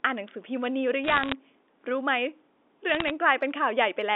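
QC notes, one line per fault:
1.04–1.33 s, bit errors on a digital phone line: a burst of sharp ticks and crackle over the speech. Roughly one bit in 140 is flipped, and each flip corrupts a single A-law sample; hits on the sign or upper bits jump the sample far from its neighbours, producing a click.
2.89–3.11 s, bit errors on a digital phone line: a lighter crackle burst, near 0.4 percent error rate, same single-sample mechanism, heard against the narrow 250 Hz to 3.6 kHz line band.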